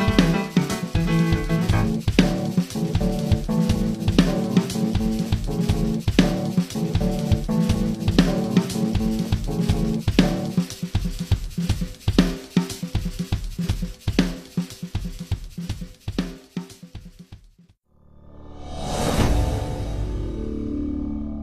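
At 19.23 s a brief disturbance of about 50 ms interrupts the audio, heard as a chirp, squawk, click or short hole. This is damaged data in a compressed stream: corrupted bytes made the decoder misread its frames and lose sync until it found the next valid frame header.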